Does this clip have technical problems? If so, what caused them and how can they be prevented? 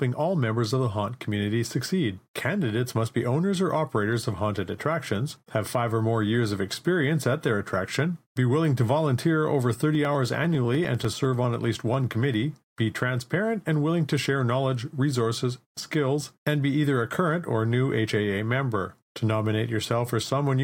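Yes. From 9.95 to 12.54 s, just after "willing to volunteer over", the speech carries regular ticks every 0.1 s. These are periodic USB or driver dropouts, each skipping well under a millisecond of audio. Prevent them by disabling the background task or power-saving feature that polls the USB bus, and by using a larger audio buffer.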